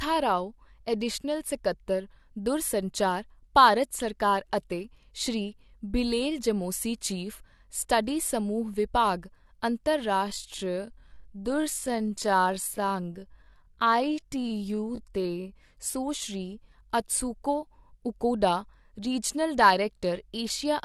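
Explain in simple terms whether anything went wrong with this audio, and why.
Something did go wrong in the middle of this speech clip. From 10.16 to 15.56 seconds, the talking suddenly slows to about 0.64 times its normal pace, yet the pitch of the voice does not drop. That odd mix points to a time-stretched section. Software likely lengthened this part to fill a set amount of time. It keeps the pitch steady by repeating tiny slices of sound. After 15.56 seconds, the normal pace returns.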